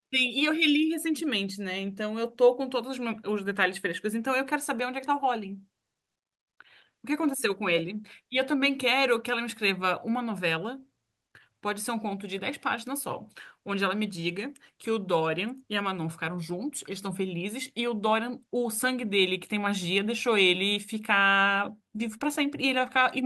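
Nothing in the speech stood out as a technical fault on listening.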